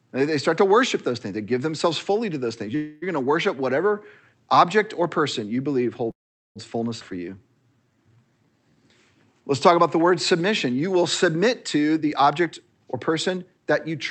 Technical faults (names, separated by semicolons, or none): call audio freeze; skip ahead; jitter buffer slow-down; jitter buffer speed-up